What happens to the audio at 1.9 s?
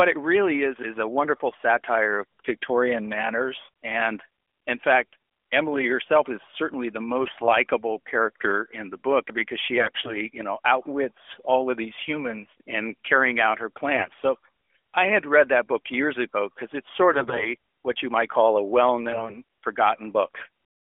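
At 1.9 s the speech continues intact through the narrowband mobile line, with no dropout, click or break at that moment.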